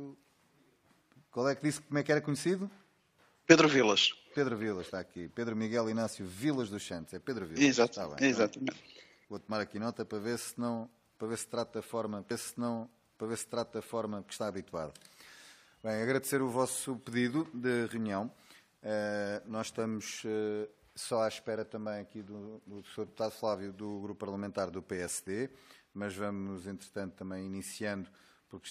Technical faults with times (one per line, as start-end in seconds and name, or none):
12.30-14.29 stream segment repeated